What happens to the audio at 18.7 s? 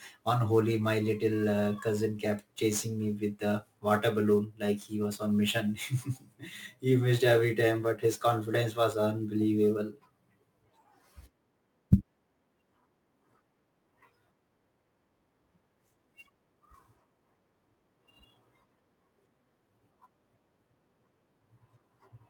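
At 18.7 s the speech carries sample clock jitter, present across the whole clip. Timing wobble of around ten microseconds smears steep waveform slopes, adding a hiss roughly 25 dB below the signal that swells on loud, bright sounds and vanishes in pauses, unlike a steady noise floor.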